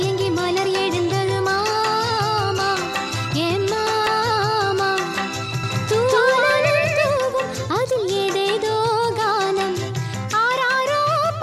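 A slower second capture path likely adds the audio again from 5.63 to 7.17 s: a doubled audio track, its equally loud copy trailing about a fifth of a second behind.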